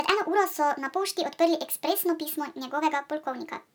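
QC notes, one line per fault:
Throughout: wrong sample rate. The whole clip runs 1.5 times faster than it should, and pitch rises with it by about 7 semitones, close to a musical fifth, so the speech sounds high, chipmunk-like and hurried. Speed and pitch shift together because the samples are clocked out faster than they were captured, with no rate conversion in between. The 1.5 ratio fits 32 kHz material being played back at 48 kHz.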